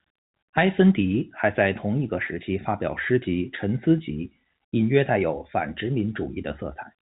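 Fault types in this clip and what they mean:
There are no fault types in this clip.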